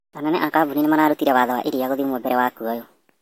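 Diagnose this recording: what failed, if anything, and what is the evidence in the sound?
A wrong sample rate at the playback stage: the samples reach the converter at a faster clock than they were captured at, with no resampling in between. The speech is high and hurried for the whole clip, running 1.5 times too fast and pitched up about 7 semitones, close to a musical fifth. Speed and pitch shift by the same ratio, which fits 32 kHz material being played out at 48 kHz.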